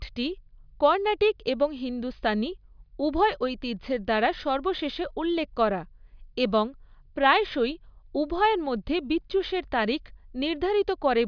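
No technical faults can be heard anywhere in this speech recording. Nothing in the audio path breaks down or draws attention to itself at any point.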